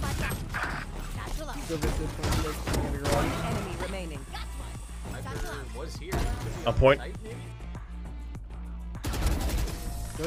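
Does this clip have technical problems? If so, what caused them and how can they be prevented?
No, there are no technical faults to report and nothing that needs preventing.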